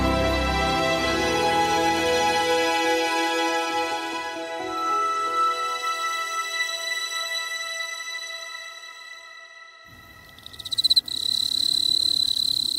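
No technical faults can be heard anywhere in this audio.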